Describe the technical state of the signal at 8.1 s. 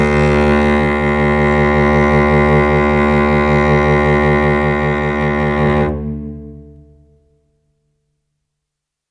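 At 8.1 s the music plays through intact, with no audible technical fault at that moment.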